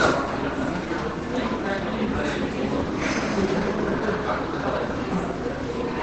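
From start to finish the sound is muffled and hoarse, with the top end cut off around 8 kHz. That's likely heavy Opus compression, with the encoder dropped into its SILK speech mode, which fits a very low bitrate near 12 kbps.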